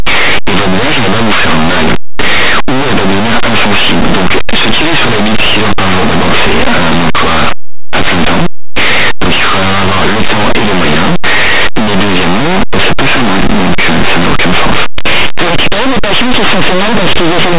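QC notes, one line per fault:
Throughout, linear audio read as companded: plain 8-bit samples decoded as mu-law, so values just on one side of zero jump to the largest outputs, hence the harsh, crunchy distortion.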